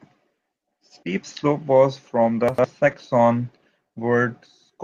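At 2.83 to 2.93 s, just after "slope was from the", there's a lost packet rebuilt from error correction. Low-bitrate backup copies fill the gap, so the sound turns briefly rough and noisy.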